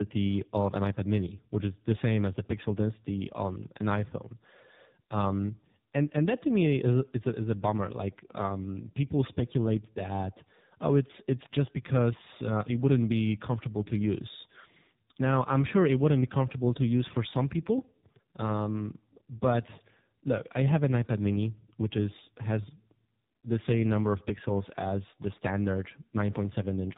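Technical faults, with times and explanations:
Throughout, tandem speech coding: the speech passed through two low-rate speech codecs in a row, first iLBC at 15.2 kbit/s and then AMR-NB at 7.95 kbit/s, with a G.711 mu-law link between them. Each coder re-encodes the previous one's errors, so the speech sounds rough, muffled and warbly, with nothing above 3.8 kHz.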